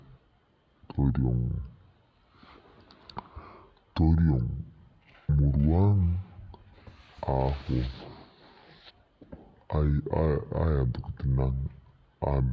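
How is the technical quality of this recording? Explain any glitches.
The recording has a wrong sample rate fault throughout. The speech runs at about two-thirds of its proper speed and sits roughly seven semitones low, so it sounds slow, heavy and deepened. Speed and pitch drop together because the samples are played out slower than they were captured, with no conversion. A 2:3 ratio fits audio recorded at 24 kHz and played back at 16 kHz.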